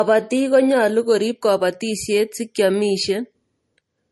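The speech sounds dull across the whole clip, with nothing at all above about 11.6 kHz and the artefacts that heavy MP3 compression leaves. This is low-bitrate audio saved at a high bitrate: the file was likely first encoded as a low-rate MP3, which fits something around 40 kbit/s, and then re-encoded at a much higher rate, which kept the lost top end and artefacts rather than restoring them.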